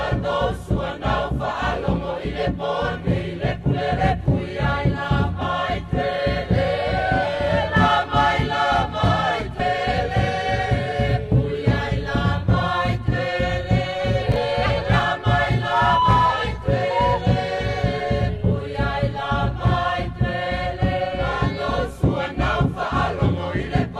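At 0.76 s the audio jumps forward by roughly one compressed frame, about 30 ms, and at 5.41 s and 9.59 s by about three frames, some 70 ms. These are compressed frames skipped. Each jump is a multiple of a frame length that fits about 26 ms. The join is a soft, smeared blip rather than a click, because overlapping neighbour frames blend across the gap.

From 14.32 to 14.36 s, chunks play out of order. One 20 ms chunk arrives a single chunk late and plays after the audio that should follow it. Nothing is missing, but the three hard joins give a brief jumbled moment, which separates it from the smoother frame skips.

Single-frame skips of about 30 ms return at 14.66 s and 16.02 s, each with the same muted blip.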